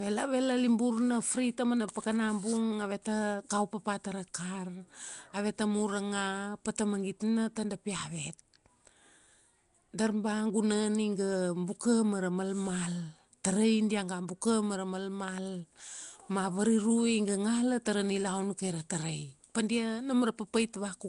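A speech recording with Nellymoser compression running through all of it. The damage is plainly audible. A rough, hissy halo surrounds the speech, and everything has a smeared, underwater quality. The band-filling noise suggests weak frequency regions received no bits and were patched with noise. Nothing is present above 10.6 kHz. The cause is likely the Nellymoser Asao codec, the old Flash microphone format, at a rate that fits roughly 44 kbps.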